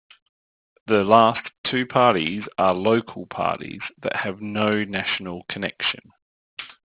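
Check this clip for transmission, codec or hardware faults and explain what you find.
There is one fault, aliasing, and it runs through the whole speech clip. The audio was downsampled, apparently to about 8 kHz, with no low-pass filter first, so energy above 4 kHz folds back below it. Sibilants turn gritty and metallic, with spurious tones around 20 dB below the speech and the spectrum crowding hard against 4 kHz.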